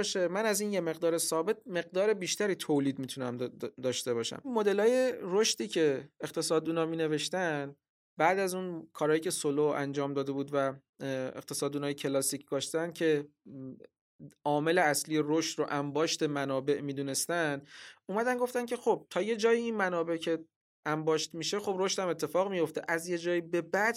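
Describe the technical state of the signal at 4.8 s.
At 4.8 s the speech signal is intact, with no technical fault present at that moment.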